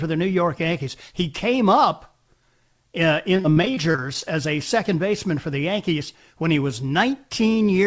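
Speech passed through a call path whose output stops at 8 kHz, which fits a wideband codec such as G.722. From 3.35 to 4.23 s it suffers repeated packet loss, giving a choppy, robotic sound. More than a dozen short dropouts, the longest 39 ms, are each patched by extending the preceding sound, so about 28% of that stretch is synthetic fill. On a spectrogram, harmonics smear into flat, repeated slices broken by abrupt seams. The waveform shows copied cycles and sudden envelope steps.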